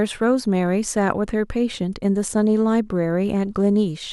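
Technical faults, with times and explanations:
No technical faults are heard in this speech clip.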